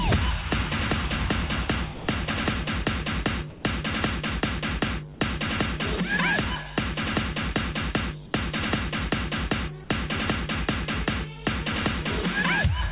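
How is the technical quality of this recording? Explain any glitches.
The recording has five brief gaps where the sound gives way to comfort noise. The band stops at 4 kHz, which fits a G.711 mu-law call at 64 kbps.

Sound dropped by the voice detector occurs at 1.94–2.08 s, 3.50–3.64 s, 5.14–5.20 s, 8.26–8.34 s and 9.84–9.90 s, lasting 60 to 140 ms. The sender's voice detector likely mistook the sound for background and stopped transmitting. The receiver filled each gap with steady comfort noise until the sound resumed.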